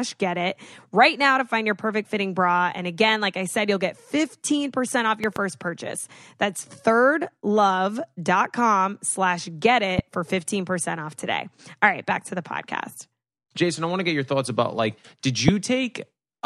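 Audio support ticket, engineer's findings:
Loud pop, three events, rising in level. Double pop 5.24–5.39 s, about 10 dB above speech. Single pops 9.99–10.01 s after "slash get", about 15 dB, and 15.48–15.51 s after "thoughts about like did", about 20 dB. Speech continues underneath. Likely a connector, switch or static voltage pulse.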